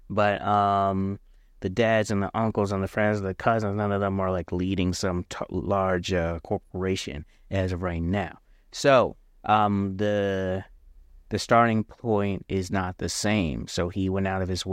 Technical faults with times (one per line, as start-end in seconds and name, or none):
none